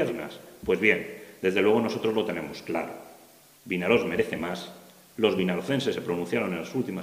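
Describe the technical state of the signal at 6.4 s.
At 6.4 s the signal is intact, with no audible technical fault at that moment.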